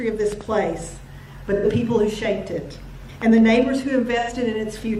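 A sharp double pop, peaking a few dB above the audio, punches through at 0.32 to 0.43 s and again at 3.22 to 3.40 s while the sound carries on beneath it. This loud pop is likely a voltage step from a plug, switch or static discharge that the following circuitry shapes into a thump. At 1.55 to 1.65 s and 4.19 to 4.30 s the audio turns briefly smeared and phasey for about 85 ms. This is AAC frame loss with concealment, where the decoder rebuilds the gap from the last good spectrum. The gap's length fits two lost frames.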